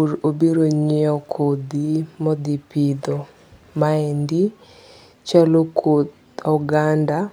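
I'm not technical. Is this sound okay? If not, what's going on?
Yes, the recording has no technical faults that a listener would notice.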